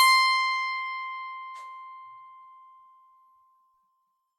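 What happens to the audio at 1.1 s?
At 1.1 s the music plays through intact, with no dropout, click or other audible fault at that moment.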